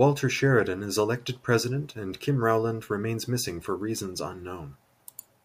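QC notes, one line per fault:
No faults found in this speech clip.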